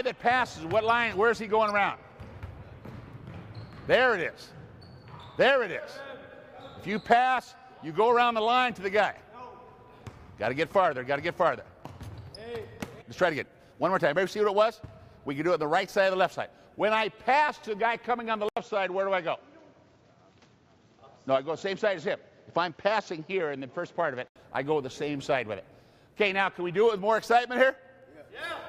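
A skip ahead occurs at 13.01 s. About seven tenths of a second of audio that had already queued up behind the current playback point was discarded, and playback jumps straight to the later material. No filler is inserted, so the two sides of the cut butt together almost seamlessly, and a chunk of the sound simply vanishes. The playback delay shrinks by the same amount.

Jitter buffer speed-up follows from 13.13 to 14.84 s. The receiver was still holding more audio than its target, so it trimmed out many tiny slices, each a pitch period or so long, removing roughly 150 ms in total. The sound plays at 108 percent of normal speed without any shift in pitch, so this stretch comes across as slightly rushed and compressed in time.

At 18.49 s the input switches to a poorer device, most likely a different microphone or a headset's call profile, and it stays that way until 24.36 s. An 80 ms silence marks the changeover. 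Nothing above 7.6 kHz gets through, so the sound turns duller and loses its airy top end. New background noise appears, about 40 dB below the signal, while the overall loudness stays about the same.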